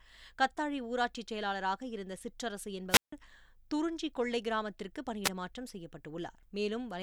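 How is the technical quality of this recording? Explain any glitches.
The speech cuts out twice with wireless microphone squelch dropout, from 2.89 to 3.13 s and at 5.24 to 5.29 s. The radio signal fades, hiss swells, and the receiver's squelch mutes for about 157 ms, then briefly for under 2 ms. That rising static before the hole separates it from a digital packet dropout, which stops abruptly.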